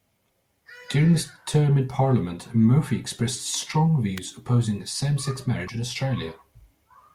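A sharp snap at 4.18 s, right after "expressed strong," sits on top of the speech in this clip, lasting only a few milliseconds. It is an electrical switching spike, likely from a nearby switch, motor or static discharge arcing briefly and being picked up by the audio line. From 5.65 to 5.70 s, about 50 ms, there is a brief glitch. That is damaged data in a compressed stream. Corrupted bytes caused the decoder to misread those frames, lose sync and skip ahead to the next valid frame header.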